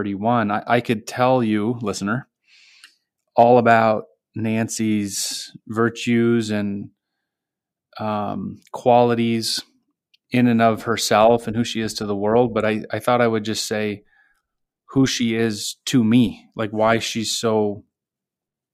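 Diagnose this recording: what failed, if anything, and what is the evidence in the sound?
No failure is audible anywhere in this speech recording.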